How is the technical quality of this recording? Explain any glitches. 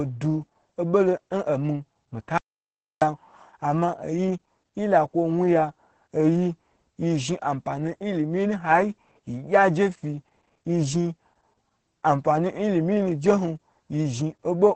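The technical quality is poor. Heavy codec damage runs through the whole speech clip, and one section drops out completely.

Opus voice compression affects the entire recording. Nothing is heard above about 8.7 kHz. The speech sounds muffled, hoarse and slightly robotic. The SILK linear-prediction coder codes the excitation coarsely, which fits a low bitrate of around 10 kbps.

An audio dropout to silence runs from 2.38 to 3.02 s, about 0.64 s. The sound cuts out to silence with no room tone. It resumes at "ama oyi yi". The input was likely lost briefly while silence was written.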